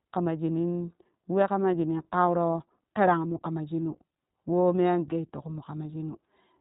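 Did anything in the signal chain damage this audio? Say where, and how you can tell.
Yes, at the codec stage, for the whole clip. The speech is narrowband, with nothing above 3.8 kHz, and has the slightly rough, synthetic texture of the iLBC codec. That roughness fits 20 ms frames each coded on its own, at a rate that fits 15.2 kbps. A plain low-pass or analogue telephone line would cut the top the same way but leave the remaining speech smooth and natural, without the plainly audible coding grain.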